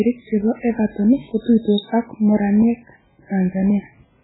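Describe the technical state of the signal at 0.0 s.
At 0.0 s the speech sounds heavily watery and swirly, with nothing above 3.9 kHz, and this holds across the whole clip. The likely cause is MP3 compression at a starved bitrate, which fits about 8 kbps, so weak frequency lines drop in and out between frames and the treble is cut.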